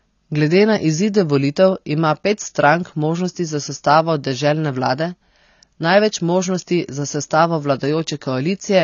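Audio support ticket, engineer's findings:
Likely AAC compression at a low bitrate, consistent with about 24 kbps, throughout: band-limited at 7 kHz, dull, smeared, warbling and fizzy sibilants.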